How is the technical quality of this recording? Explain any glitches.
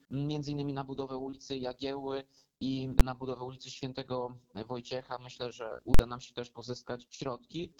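The recording is marred by two loud digital bangs, both invalid numbers at full scale. At 3.00 s a processing calculation produced infinite or invalid values, which were forced to the largest positive or negative value for a block of about 12 ms, fitting a 512-sample buffer. That short a block registers as a single bang. From 5.94 to 5.99 s a longer block of about 46 ms, consistent with 2048 samples, sits pinned at one extreme value far beyond the audio's peaks, so it gives a hard pop on entry and another on exit, with nothing audible between them. Unlike clipping, which flattens only the loud peaks and leaves the surrounding audio present, these stretches replace the audio entirely with a fixed extreme value.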